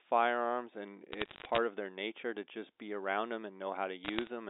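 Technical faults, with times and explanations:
1.12 to 1.58 s, bit errors on a digital phone line: Sharp ticks crackle over the speech, stopping just before "of their nature to". Some bits on this G.711 line flipped, at roughly four in a thousand. Each flip corrupts one sample. A hit on a high bit, or on the sign of a loud sample, throws that sample far off, so it clicks.
4.05 to 4.28 s, bit errors on a digital phone line: The same crackle returns after "just be around them", at around half a percent. The speech underneath is unchanged.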